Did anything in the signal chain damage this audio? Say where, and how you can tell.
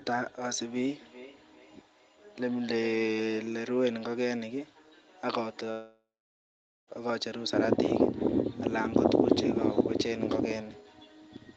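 Yes. From 0.41 s to the end there is a USB whine at the analogue wiring and power stage. It is a fixed tone built on 1 kHz, with its strongest component near 9 kHz, about 35 dB below the speech. The pitch never follows the speech, which points to bus current from the 1 ms USB frames leaking into the microphone's supply or ground rather than to anything acoustic.

Between 0.99 s and 3.29 s there is feedback echo between two devices, arising in the call processing stage. Each stretch of speech returns at a regular spacing of roughly 0.4 s, thinner and more ringing than the original, with the loudest repeat about 19 dB under the speech. A second device in the same room is playing this call aloud and the microphone is picking it up. The local echo canceller only removes its own device's playback, so that sound survives.

From 5.71 s to 6.89 s the speech breaks off. The last sound carries on as a fading buzzy smear, and about 0.83 s of near-silence follows before the speech resumes further along. 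Roughly 1.16 s of audio never arrives. This is likely a long network dropout, where the receiver's concealment extends the final fragment until it gives up and the stream rejoins without the lost section.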